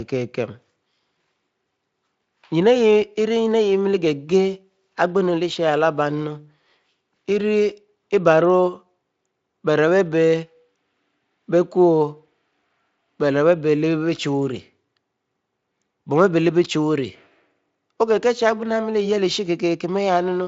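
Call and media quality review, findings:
No audible faults found.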